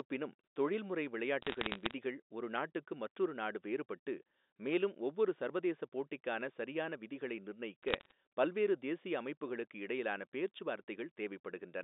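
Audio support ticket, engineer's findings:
Bit errors on a digital phone line: crackle of sharp ticks at 1.42–1.94 s, before "ஒரு நாட்டுக்கு மற்றொரு நாடு", and at 7.83–8.12 s, between "சரியான விதிகளை" and "பல்வேறு தேசிய அமைப்புகளுக்கு இடையிலான". Flipped bits corrupt single G.711 samples. Unlike dropouts, the speech underneath stays intact, with no gaps.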